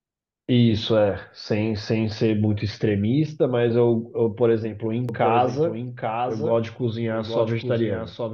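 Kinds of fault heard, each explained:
Doubled audio track: From about 5.09 s to the end, the speech is heard twice. A second copy trails the first by roughly 0.7 s, about 5 dB quieter. It carries the full frequency range and has no decay or room colour, so it reads as a clean echo. It starts abruptly at that point. The likely cause is the same signal reaching the mix again through a slower path, or an edit holding two misaligned copies.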